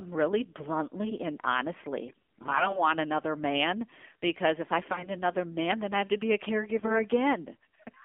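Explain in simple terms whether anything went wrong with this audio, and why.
The whole recording sounds thin, muffled and buzzy, as if heard over an old mobile phone. That's the AMR narrowband mobile codec: it squeezes speech into a small data stream, discards everything above about 3.5 kHz, and rebuilds the voice from a simplified model, which leaves it synthetic.

Three stretches turn hoarse, scratchy and gargly while keeping roughly the same pitch and loudness: 2.08 to 2.85 s, 4.92 to 5.09 s and 6.78 to 7.02 s. These are AMR bit errors. Parts of the compressed data arrived corrupted, so the decoder rebuilt the voice from partly wrong information.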